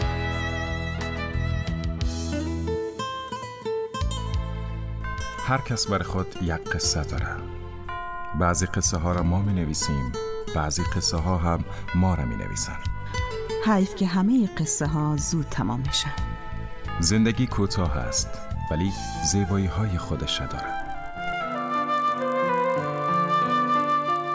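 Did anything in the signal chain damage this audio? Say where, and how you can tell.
Yes. From 20.56 s to the end, the sample-rate conversion stage damages the audio: the resampler was restarted on every block. Each block of about 20 ms was converted in isolation, which fits a 44.1 kHz to 16 kHz conversion, so every block edge carries a small error. The result is a 50 Hz buzz that appears only where there is signal. A spectrogram shows faint vertical stripes every 20 ms and a comb of 50 Hz harmonics. The waveform shows small discontinuities at each block boundary.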